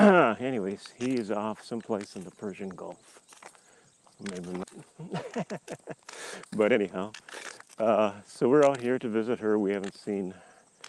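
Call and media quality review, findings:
Skip ahead, 4.63–4.65 s: audio jumps forward about a second with no gap or fill. Queued audio was dropped, unlike a dropout, which leaves silence or concealment.

Jitter buffer speed-up, 4.85–6.05 s (109%), 6.45–7.22 s (116%), 7.62–8.92 s (109%): the audio is hurried but keeps its pitch. Pitch-period cuts drained the excess delay, unlike a resampling error, which shifts pitch.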